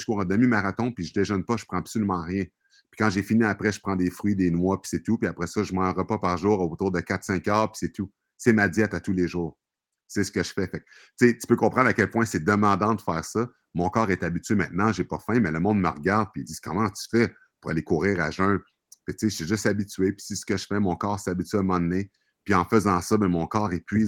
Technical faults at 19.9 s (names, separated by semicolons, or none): none